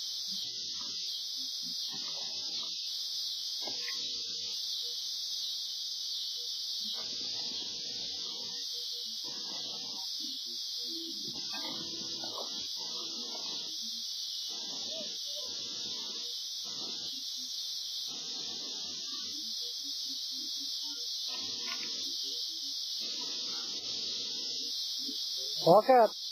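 No technical faults can be heard anywhere in the signal.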